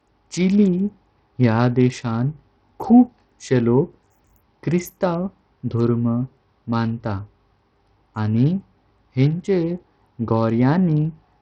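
Throughout, the speech is heavily degraded, likely by Bluetooth SBC compression at a low bit pool, roughly 64 kbps: flickering treble, gritty noise and nothing above 16.9 kHz.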